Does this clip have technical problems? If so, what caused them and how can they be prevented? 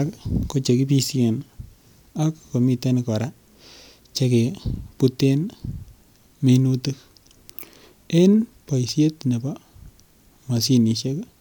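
No, nothing in this speech clip points to a technical fault, so there is no cause to trace and nothing to prevent.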